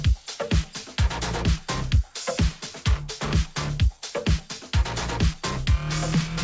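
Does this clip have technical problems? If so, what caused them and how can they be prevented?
No, no technical problems heard.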